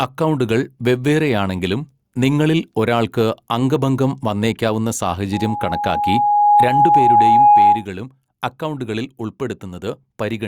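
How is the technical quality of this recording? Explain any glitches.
The recording has one fault, gain pumping, throughout the speech. The gain swings about 10 dB, pulled down under loud sounds, so loud and soft parts end up closer in level. The likely cause is excessive input gain with a fast limiter. The sound is squashed.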